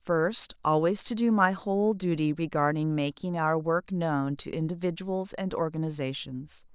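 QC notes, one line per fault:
No faults found on review of the speech.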